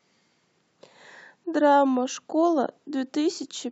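Speech recording, no technical faults detected.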